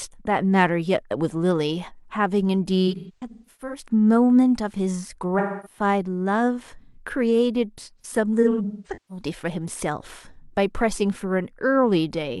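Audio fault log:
2.87–3.86 s: AAC frame loss with concealment. Dropouts scattered across this stretch add up to about 0.55 s, the longest around 150 ms. The decoder rebuilds each gap from the last good spectrum, so you get smeared, noisy patches.
5.38–5.79 s: AAC frame loss with concealment. Lost frames adding up to about 0.26 s, filled in from the last good spectrum as a smeared, noisy patch.
8.00–9.24 s: AAC frame loss with concealment. The same scattered smearing, again about 0.55 s in total, with the longest run around 200 ms.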